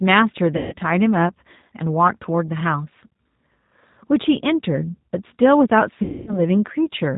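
The whole clip carries the G.729 codec sound, which fits an 8 kbit/s G.729A stream. Speech is rebuilt from a vocal tract filter, a pitch predictor and a few pulses per frame. Nothing passes above 4 kHz. The voice sounds rough and synthetic.

At 0.57 s, VoIP packet loss concealed by the speech codec begins. About 150 ms went missing. The decoder repeats its last pitch and filter with falling gain, giving a fading buzzy tone or coloured noise until 0.75 s. At 6.03 s, a longer gap of 240 ms follows. It stays weak and distorted until 6.42 s.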